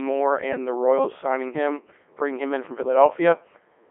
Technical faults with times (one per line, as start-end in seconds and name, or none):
0.00-3.91 Codec 2 vocoder